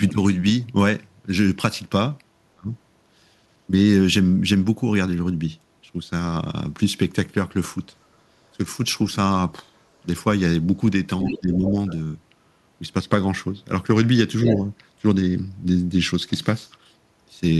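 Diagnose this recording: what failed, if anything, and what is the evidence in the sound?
Speech suppressed in double talk, at call processing: the talker ducks about 30 dB at 2.55–2.7 s and about 15 dB at 11.23–11.76 s, likely an echo canceller clamping during overlap, not a network dropout.

Other side's voice leaking through, also call processing: brief second-voice scraps at 11.27–11.39, 11.87–11.94 and 14.46–14.55 s, 10–25 dB under the talker. Residual echo likely escaped cancellation, unlike steady wiring crosstalk.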